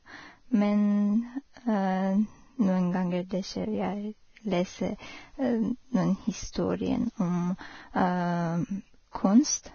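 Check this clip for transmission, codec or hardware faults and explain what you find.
There are two problems here: heavy lossy-codec damage across the whole clip, and one pre-echo near the end.

The speech sounds hissy and grainy from start to finish, and there's nothing above about 6.6 kHz. That's most likely Vorbis compression running at a very low rate, somewhere around 18 kbps. At that rate the encoder keeps only a rough outline of the spectrum and quantises the upper frequencies so coarsely that the fine detail turns into noise of about the same level. That's where the grit and the dull, band-limited top end come from.

At about 6.52 s, just after "lese noen", there's a pre-echo lasting about 29 ms, until 6.55 s. A sharp onset lands late in a transform block, and the coding noise meant for the loud part gets spread back over the quiet stretch before it. You hear it as a brief hiss running ahead of the attack, and the attack itself comes out softened and smeared instead of crisp.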